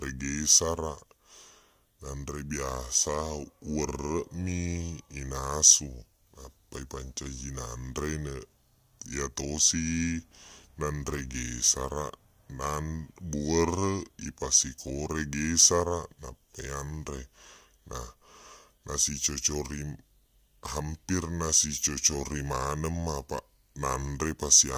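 Wrong sample rate, present from start to finish: the samples are clocked out more slowly than they were captured, with no conversion in between, so speed and pitch drop together. Everything runs at about 0.73 times normal speed and sits about 5.5 semitones low, which fits audio recorded at 44.1 kHz being played back at 32 kHz. The speech sounds deep, sluggish and drawn out, with vowels stretched and the whole timbre darkened.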